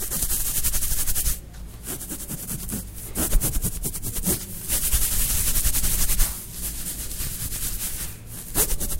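From start to finish the resampler restarts on every block: each 20 ms block is converted on its own, as if for a 48 kHz to 44.1 kHz change, so at every block edge the converter lacks the real neighbouring samples and leaves a small error. With blocks that short, the errors repeat at 50 Hz and merge into a low buzz riding under the sound, heard only while sound is present and dropping away in silent stretches.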